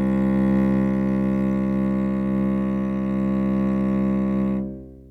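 No technical faults are audible.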